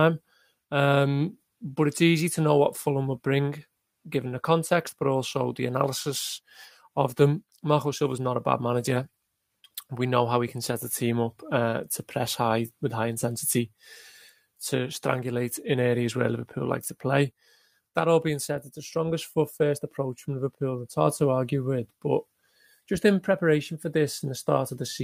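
No dropouts, clicks, clipping, distortion or level jumps turn up anywhere in this recording.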